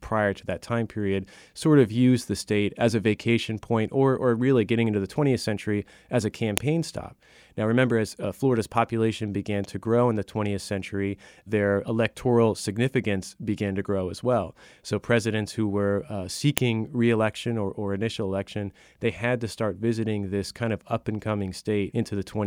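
At 6.58 s and again at 16.58 s, exactly 10 s apart, a file header played as audio produces a sharp, loud click. Header bytes from joined pieces were decoded as samples, showing as a brief spike on the waveform and a thin full-height vertical line on the spectrogram.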